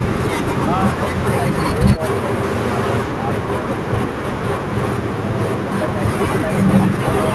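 Speech suppressed in double talk appears from 7.01 to 7.06 s in this speech recording: for about 50 ms near the end, the level dips by roughly 10 dB and then recovers. The likely cause is an echo canceller reacting to both ends talking at once. Unable to separate the near talker from loudspeaker echo, it attenuated everything briefly. The call-codec path itself sounds as expected, with content reaching up to about 12 kHz, which fits Opus at a moderate bitrate.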